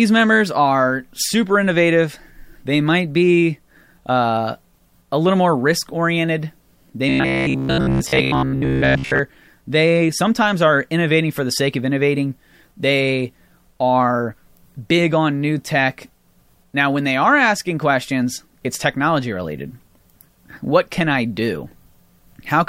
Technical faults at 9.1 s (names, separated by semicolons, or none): robotic sound from repeated short buffers